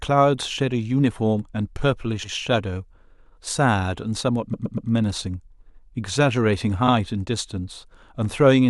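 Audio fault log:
2.23–2.33 s, repeated frames: a 100 ms block of compressed frames was delivered twice, so the decoder replays it, giving a short stutter and 100 ms of added time.
4.53–4.89 s, repeated frames: a 120 ms block was sent four times in all, producing a triple stutter and 360 ms added.
6.87–6.93 s, repeated frames: a 60 ms block was duplicated once, so this brief slice of speech is heard twice, a quick hiccup lengthening the audio by 60 ms.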